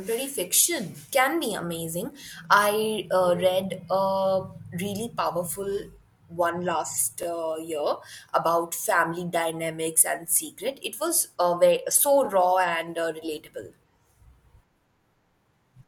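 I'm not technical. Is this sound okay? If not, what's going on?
No. The speech has a fault called overlapping chunks. The audio was handled in 5-second pieces, and each piece started 20 ms before the previous one ended. That tiny bit plays twice, causing a brief stutter or click at 2.21, 7.23 and 12.25 s, after "fiction can be amazing", "really powerful one last" and "was uh very so".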